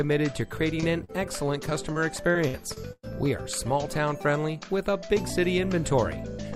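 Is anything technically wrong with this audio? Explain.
Yes, there are two kinds of fault.

Short concealed packet loss at 0.80 s and 1.04 to 1.10 s: roughly 20 and 40 ms never arrived, and the receiver extended the preceding sound, leaving brief smears.

Repeated packet loss (robotic sound) from 1.70 to 3.15 s: seven successive dropouts, the longest about 108 ms, were each patched by continuing the prior sound, leaving choppy audio with pieces missing.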